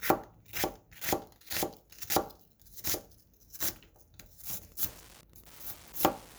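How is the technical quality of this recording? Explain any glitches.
The recording is clean until late in the clip, where one fault appears. Wi-Fi interference starts at 4.52 s and runs to the end. A nearby Wi-Fi radio's beacon, sent every 102.4 ms, is picked up and rectified by the audio circuit. It is heard as steady ticking about ten times a second, well below the main sound.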